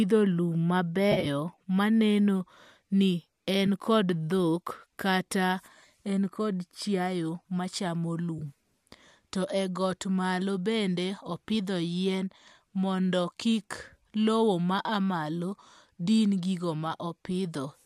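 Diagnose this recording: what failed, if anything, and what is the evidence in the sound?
AAC frame loss with concealment in transit: phasey smears at 1.12–1.27 s before "maneno ni", 3.67 s after it, and 8.39–8.42 s, where the decoder guesses the lost frames.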